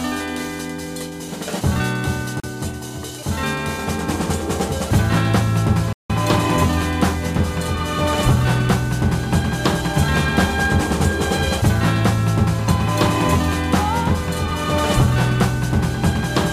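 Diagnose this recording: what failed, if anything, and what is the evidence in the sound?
At 2.40 s the sound drops to silence for about 35 ms and resumes at 2.44 s, a short clean gap. This is likely a Bluetooth stall at the wireless link. Interference delayed packets, the headphone buffer emptied, and output paused until retransmissions arrived. Its brevity and hard edges set it apart from a dropout in wiring, which crackles, and from a codec loss, which leaves concealment artefacts rather than true silence.

A second, longer gap runs from 5.93 to 6.10 s, roughly 168 ms of silence before the sound picks up again. This points to a playback stall, likely in the player itself, where the data supply ran short or the output thread was blocked and nothing was rendered until it recovered. The much longer duration distinguishes it from the brief wireless stall earlier.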